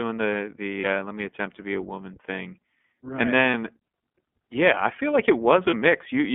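Speech squeezed through the iLBC codec, with a narrowband line of about 150 Hz to 3.4 kHz and plainly audible coding damage, roughly what you'd expect from a 13.33 kbps mode with 30 ms frames. Lost iLBC frames show up as brief buzzy held-vowel patches at 0.80, 3.50 and 5.70 s. Each one lasts about one 30 ms frame, and the voice snaps straight back afterwards.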